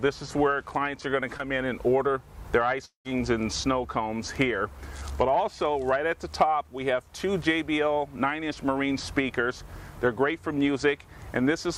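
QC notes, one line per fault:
1.37–1.41 s, short concealed packet loss: a brief smear lasting about 40 ms, where roughly 20 ms of audio failed to reach the decoder in time. The receiver filled the gap for about 18 ms by extending the sound that came just before, reusing its pitch where it was tonal and shaped noise where it was not, then crossfaded back into the real signal. The result is a short wobble or blur rather than a clean cut.
2.85–3.07 s, long network dropout: the sound stops being real and turns into a continuation of the last moment, a buzz or hiss that fades out, followed by about 110 ms of near silence before the audio resumes further along. This is likely a dropout of about 200 ms, with roughly 194 ms papered over by the receiver's concealment. The material that should have filled that stretch never plays, so the resumption jumps ahead.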